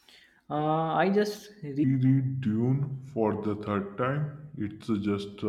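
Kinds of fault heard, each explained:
Section at the wrong speed: from 1.84 s to the end, the speech plays at 0.778 times its proper rate, so speed and pitch drop together at a single moment and the voice turns slow and deep, about four semitones lower. The likely cause is a section being fitted to the wrong clock. On a spectrogram, harmonics and formants shift downward and stretch in time at that point; the waveform shows wider syllable envelopes and longer gaps.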